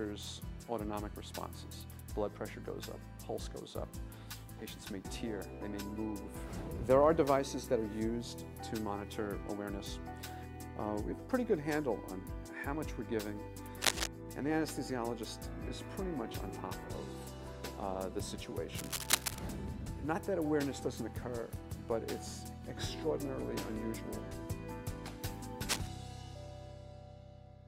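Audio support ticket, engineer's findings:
Cable scratch noise, three bursts: 13.81–14.07 s, 18.74–19.39 s, 25.68–25.87 s. Scratchy, rustling crackle, first burst about 5 dB louder than the programme, later two about level with it. Likely a worn cable, connector or control being moved, contact resistance fluctuating fast. Spectrogram: dense, irregular broadband smears in vertical streaks. Waveform: ragged spiky clusters riding on the signal.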